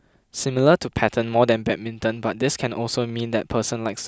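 Nothing here needs flagging: the speech runs along steadily with no technical faults to point out at any moment.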